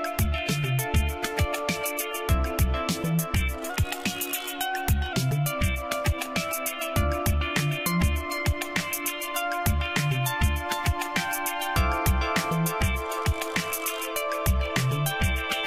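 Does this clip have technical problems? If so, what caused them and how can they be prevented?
Yes. From 3.70 to 5.13 s there's a wrong sample rate fault. The sound runs about 1.09 times fast and sits roughly 1.5 semitones sharp, which fits 44.1 kHz material played at 48 kHz without conversion. To prevent it, resample whenever the source rate doesn't match the output device.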